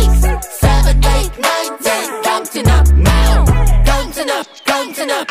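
No technical faults can be heard anywhere in the audio.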